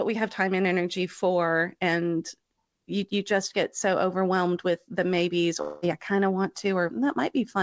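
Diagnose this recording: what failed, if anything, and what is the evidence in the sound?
Right after "overwhelmed with the maybes", from 5.62 to 5.84 s, the sound turns into a smeared, fading buzz for about 0.2 s before "I kind of want" resumes. This is a long network dropout: packets likely never arrived, and the receiver's concealment stretched the last sound over the gap.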